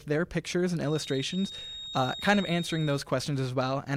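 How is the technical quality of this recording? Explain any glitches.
A feedback whistle mars the recording. From 0.8 to 3.07 s, a thin, steady tone at 3.7 kHz sits behind the sound. It stays roughly 15 dB below the main signal and swells and fades slowly in level. The likely cause is a loudspeaker-to-microphone loop poised right at the edge of feedback. One high frequency keeps recirculating without building into a howl.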